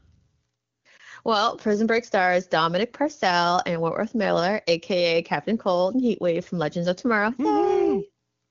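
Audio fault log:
No fault to log for this audio.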